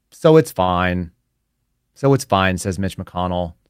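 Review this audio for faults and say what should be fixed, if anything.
A short stall from a late packet occurs at 0.63 to 0.71 s. A packet arrived late and the jitter buffer ran dry. About 44 ms of sound was stretched to fill the gap, with nothing lost. A deeper jitter buffer would prevent it.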